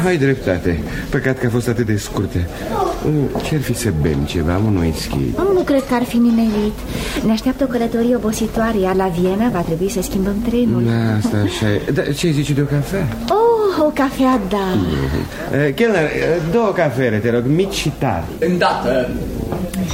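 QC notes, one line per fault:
1.29 s and 7.17 s, bit error spike: each is one sharp, broadband tick lasting a single sample, unrelated to the surrounding audio. A single flipped bit in a stored or transmitted sample pushes its value by a power of two, and it snaps back on the next sample. The impulse spreads energy across the whole spectrum. The peak reaches about -18 dBFS at 1.29 s and about -6 dBFS at 7.17 s, so the later tick is noticeably louder.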